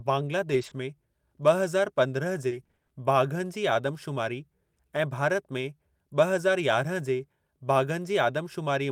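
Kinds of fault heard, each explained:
Lost packet rebuilt from error correction: from 0.45 to 0.67 s, lost packets were played from lower-bitrate copies in following packets, so the sound turns rougher and noisier without any gap.
Short concealed packet loss: at 0.69 to 0.73 s, about 20 ms never arrived and was patched by extending the preceding sound, a brief smear just before "में ब॒".
Repeated packet loss (robotic sound): from 2.47 to 2.91 s, eight separate gaps, the longest 40 ms, were each filled by continuing the last sound, leaving choppy audio before "बाघनि जी".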